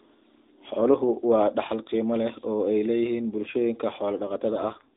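Right at the end, from 4.50 to 4.92 s, there's an AMR rate drop: the narrowband call audio stays in the same band with no gap, but the speech turns buzzier and more synthetic, which fits the codec stepping down from 12.2 to 4.75 kbps.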